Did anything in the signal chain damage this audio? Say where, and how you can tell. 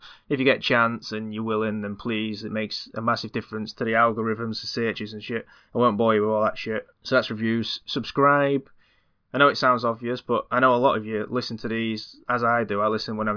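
No, nothing audible in this speech recording points to damage at any stage of the chain, with the signal holding steady level, continuity and bandwidth throughout.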